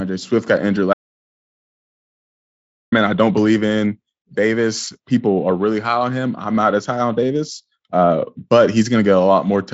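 Speech, with an audio dropout to silence from 0.93 to 2.92 s: right after "got injured" the signal falls to silence for about 2 s, with no room tone, then resumes at "I don't believe in". The waveform shows a flat line and the spectrogram a solid black gap, likely from input lost upstream while recording continued. Around it, the Speex-coded audio stops near 7.7 kHz.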